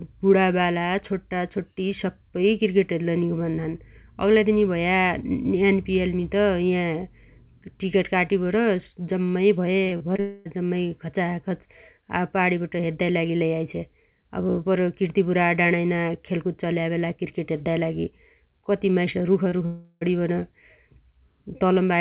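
Around 9.84 to 10.2 s the speech gets choppy. That's repeated packet loss: four separate holes in just over a third of a second, the longest about 33 ms. The receiver covers each one by stretching the last bit of sound, so roughly 100 ms of that stretch, about 28% of it, is made-up continuation rather than real audio. You hear it as a choppy texture with fragments missing.

Straight after, from 10.2 to about 10.47 s, it turns into something that sounds like a long network dropout, likely the network going quiet for about a quarter of a second. There's no actual silence. The last sound just keeps going as a fading buzz for roughly 250 ms, and when the audio comes back that whole chunk is simply gone.

Later, right after "कति माइस", there's a short concealed packet loss at 19.49 to 19.54 s. About 20 ms never made it, and the gap got patched by carrying the previous sound forward for a couple of hundredths of a second before blending back in. 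It's a tiny smear or wobble.

Then from 19.66 to 20.03 s comes a second long network dropout, again likely lost packets, this time over a third of a second. Most of that, around 355 ms, is the extended buzz dying away, with a brief silence of about 30 ms before the real audio picks up again minus the missing part. Under all of this the call path is G.711 mu-law, which fits a 64 kbps stream, so there's the usual narrowband sound with nothing above 4 kHz.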